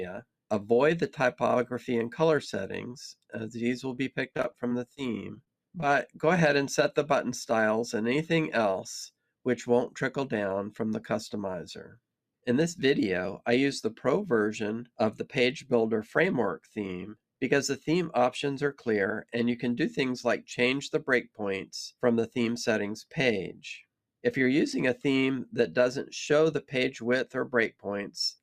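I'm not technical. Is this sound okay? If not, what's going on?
No. From 3.95 to 4.99 s there is repeated packet loss (robotic sound): bits of the audio arrived late or never, several times in quick succession. Each hole, the longest about 24 ms, was covered by stretching the sound just before it, so the passage turns choppy.

Right after that, short concealed packet loss occurs three times: 5.35 to 5.38 s, 5.44 to 5.48 s and 5.80 to 5.84 s. Each time a small piece went missing and was patched over. You hear a quick smear or wobble, and a short sound can disappear.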